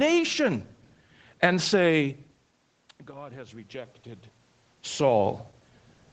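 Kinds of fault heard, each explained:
Automatic gain rising: From 3.11 to 4.02 s the voice and the room noise behind it swell together by about 4 dB. The input had dropped by about 18 dB, so the gain control judged the level too low and slowly raised its amplification to compensate.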